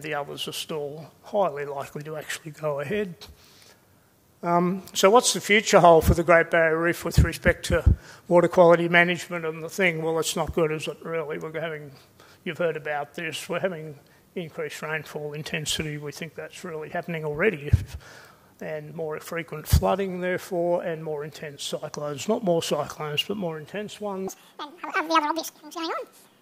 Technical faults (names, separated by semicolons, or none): section at the wrong speed